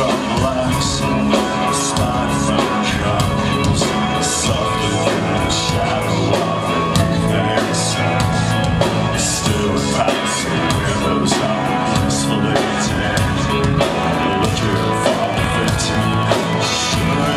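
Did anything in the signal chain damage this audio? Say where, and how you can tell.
Yes: a train of clicks from 14.04 s to 17.33 s, most likely from interference on the analogue wiring or a faulty connection or power supply. Near-identical pulses arrive at a steady 10 per second, about thirty in all, ticking well above the sound and through its pauses.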